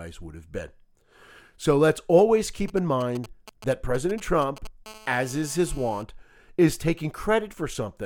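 A 2G phone close to the recording chain is exchanging signalling with its network from 2.68 to 4.67 s, and the audio circuitry is rectifying those short groups of radio bursts; in this speech recording that comes through as GSM signalling bursts, a galloping dit-dit-dit of short buzzes pulsing at 217 Hz, sitting roughly 20 dB below the speech. From 4.86 to 6.03 s a phone is evidently in a call, transmitting its bursts continuously 217 times a second, so the rectified pulses become a steady GSM phone buzz: a hard, raspy 217 Hz tone rich in harmonics, about 24 dB below the speech and entirely unrelated to it, running unbroken for just over a second.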